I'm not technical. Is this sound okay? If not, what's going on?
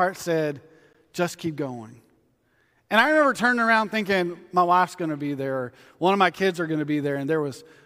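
No. At 0.93 s, just before "just keep going", there is a gap between stream segments: a hard-edged hole of silence about 14 ms long. The timing of two pieces of the stream doesn't line up, so the player inserts silence. Nothing is lost.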